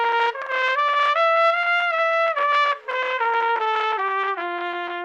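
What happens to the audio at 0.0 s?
Nothing goes wrong at 0.0 s: the audio starts cleanly, with no fault at that moment.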